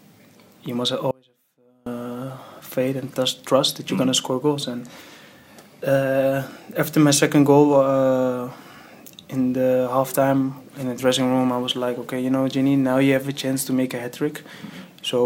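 Audio dropout to a faint residue from 1.11 to 1.86 s: the sound cuts out abruptly for about 0.75 s, leaving only a faint trace of the signal roughly 35 dB below its normal level, then snaps back in mid-flow. The hard edges at both ends set it apart from a natural pause or a fade. The likely cause is a brief loss of the main feed while the path downstream stayed live, so a low-level leak still got through.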